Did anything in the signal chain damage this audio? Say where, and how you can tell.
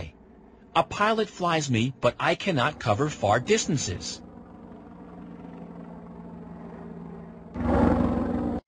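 No, nothing stood out on listening that would point to damage anywhere along the signal chain.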